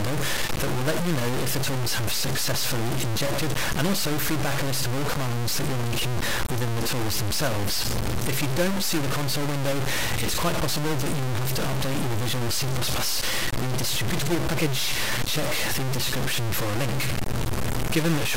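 Low bit depth without dither runs through the whole clip, from start to end. The sound is held to about three bits, most likely truncated rather than rounded and with no dither added, so the error moves with the signal instead of sitting apart as a separate noise. That error is roughly as loud as the sound itself, and anything quieter than one of the few coarse steps available drops to silence or sputters between two steps.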